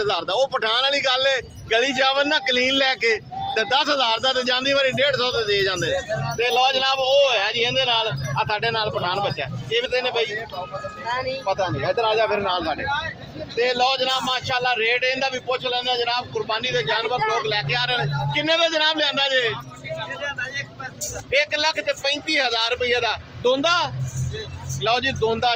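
At 9.85 s a stretch of audio, around 0.4 s of it, was thrown away in transit or by an overflowing jitter buffer while later audio was already queued. The result is a skip ahead: playback lurches forward with no gap, and the material on either side is spliced almost directly together.

From 10.45 s to 10.83 s the jitter buffer was holding more audio than its target, so the receiver trimmed short pitch-period-sized pieces one after another, roughly a twentieth of a second in all. This jitter buffer speed-up plays the sound at 111% speed with the pitch unchanged, giving a brief hurried feel.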